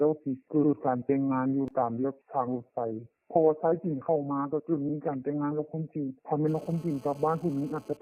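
At 4.88 s, repeated frames cause a short stutter. A 46 ms stretch of compressed audio plays twice, which fits two frames of about 23 ms each. The repeat ends at 4.93 s. The clip gains those 46 ms.

From 6.48 s to 7.97 s, a GSM phone buzz sits under the sound. A nearby 2G phone on a call transmits in bursts 217 times a second. The audio circuit rectifies them into a hard, raspy 217 Hz buzz with many harmonics. It stays steady, about 26 dB below the signal.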